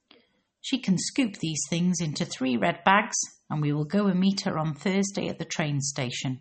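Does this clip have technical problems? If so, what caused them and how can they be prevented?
Yes. Throughout, the speech sounds watery and dull, with nothing above 8.4 kHz, which points to likely MP3 compression at a low bitrate, around 32 kbps. Encoding at a higher bitrate or keeping an uncompressed master would prevent it.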